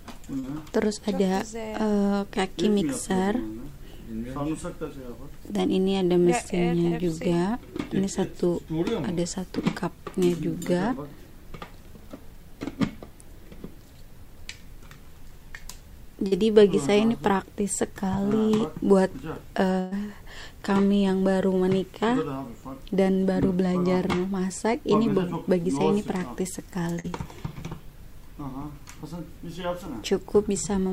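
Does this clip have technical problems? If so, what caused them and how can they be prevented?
Yes. Short concealed packet loss occurs at 0.39, 6.87 and 16.27 s. Each time about 40 ms of audio arrived too late or not at all, and the receiver covered it by extending the preceding sound, leaving a brief smear or wobble before the real signal blends back in. A more stable network path, such as a wired link, and a slightly deeper jitter buffer would prevent these gaps.

A burst of packet loss appears at 19.79 s, where about 120 ms went missing, and at 26.99 s, where about 40 ms was lost. The receiver stretched the last sound and let it fade, producing a held buzz or hiss, then resumed further on with that stretch gone. Forward error correction and reducing congestion on the connection would prevent consecutive losses like these.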